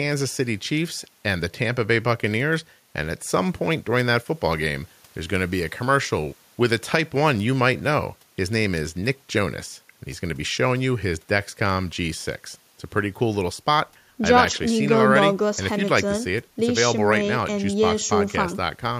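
Nothing in this speech recording stands out as a technical fault at any point, so there's nothing here to flag.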